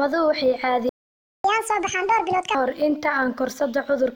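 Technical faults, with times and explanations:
0.89–1.44 s, playback stall: the speech just drops out mid-flow for about 0.55 s, likely the player running dry or its thread getting blocked, then picks up again.
1.44–2.55 s, catch-up at higher speed: the player burns through its backlog at 1.5x by resampling, so the speech turns quick and chipmunky, roughly seven semitones up, before settling back.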